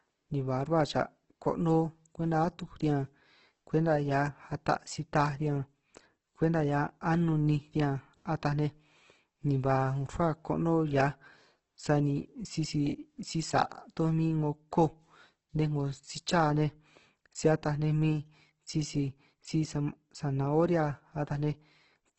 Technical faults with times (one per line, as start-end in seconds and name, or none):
0.00-22.19 Opus compression